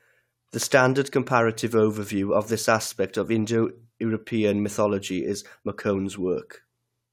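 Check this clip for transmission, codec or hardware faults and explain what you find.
Nothing to report: no fault of any kind is audible anywhere in the speech.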